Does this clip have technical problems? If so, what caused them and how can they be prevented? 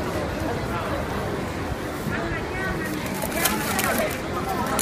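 Yes. At 4.00 to 4.02 s there is damaged data in the compressed stream: a short run of bytes arrived corrupted, so the decoder could not read those frames correctly, lost sync and had to hunt for the next valid frame header. The result is a brief glitch about 20 ms long. Checksummed storage or transfer, with retransmission of any frames that fail the check, prevents this.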